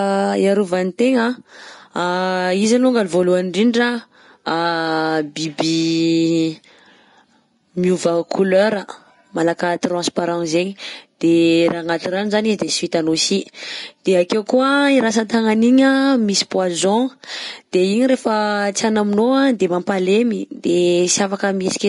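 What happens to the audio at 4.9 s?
At 4.9 s the speech sounds hissy and grainy, with nothing above about 10.6 kHz, but that moment isn't special: the same damage runs through the whole clip. It's most likely Vorbis compression at a low setting, with the sound pointing to a bitrate around 34 kbps. The encoder chops the top end and quantises the remaining treble so coarsely that fine detail turns into noise, which roughens tones and smears consonant attacks.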